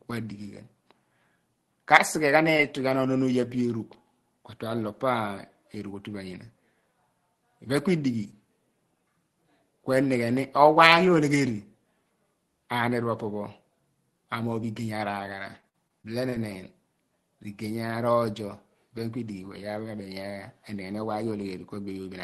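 At 2.57 to 2.61 s there is a short concealed packet loss. About 20 ms of audio failed to arrive in time, and the receiver bridged it by extending the sound just before it for about 13 ms before blending back in. This is a smear or wobble rather than a clean gap, and it differs from a dropout in that the hole is filled with a continuation of the preceding sound, not silence.

Overlapping the tail of that event, from 2.59 to 2.61 s, is a lost packet rebuilt from error correction. The next packet carried a low-rate copy of the missing 20 ms, so nothing is absent. The patch just sounds rougher and grainier. The same repair occurs alone at 14.75 to 14.77 s. Its mark of difference is texture without any continuation or hole.

From 15.17 to 16.50 s, repeated packet loss produces a robotic sound. Five separate holes, the longest 50 ms, were patched one after another, with about 10% of the stretch concealed and around 150 ms rebuilt in total. 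Unlike the isolated events, the fills arrive close together, so the sound turns choppy across the whole span instead of catching once.

Throughout, the call path's Opus coding limits the audio to about 12 kHz.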